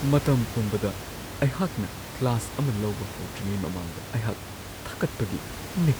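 There are no technical faults to describe in time order in this speech recording, only the room's own background noise sitting about 11 dB below the speech.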